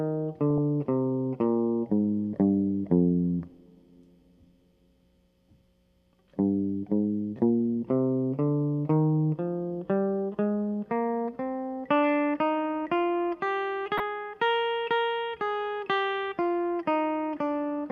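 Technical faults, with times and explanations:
0.50–0.58 s and 13.97–14.00 s, DAB burbling: bit errors from weak reception slipped past error correction into the MP2 data, corrupting samples so individual sub-bands carry short blips of noise over the music.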